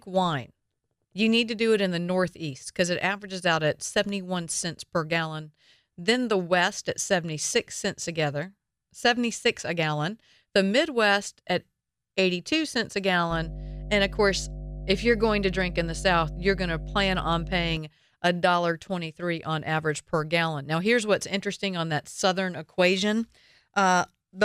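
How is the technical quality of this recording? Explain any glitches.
The recording has one glitch, a burst of mains hum. From 13.30 to 17.77 s a steady 50 Hz tone sits under the speech, roughly 10 dB below it. A ground loop or nearby transformer leaked power-line current into the signal. It sounds like a low, constant buzz.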